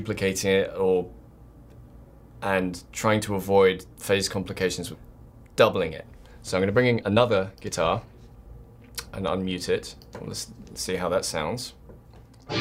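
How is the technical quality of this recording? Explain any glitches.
Two timing faults affect the recording, one right after the other.

Skip ahead, 4.93 to 4.95 s: about a second of audio was dropped while later audio was already queued, and the two sides were joined with no gap filled. Playback lurches forward, with the sound cut off abruptly and resuming mid-stream.

Jitter buffer speed-up, 5.04 to 8.37 s: the buffer was holding more audio than its target, so the receiver repeatedly trimmed pitch-period-sized slices, removing roughly half a second in total. The sound runs at about 116% speed with unchanged pitch, and it audibly hurries.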